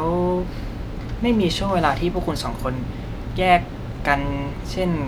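Speech, with no technical fault to be heard anywhere in the clip. Nothing in it calls for a time, a cause or a repair.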